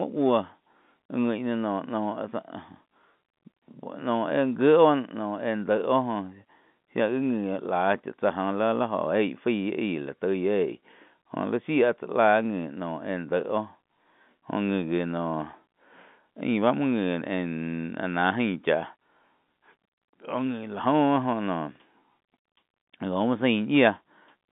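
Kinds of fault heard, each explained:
Nothing here counts as a fault: the speech simply comes through an ordinary telephone line, so it's squeezed into a band of about 150 Hz to 3.6 kHz, which is just how that kind of call is supposed to sound.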